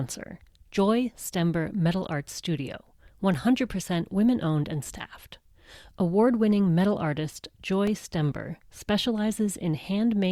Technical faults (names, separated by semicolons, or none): block of digital silence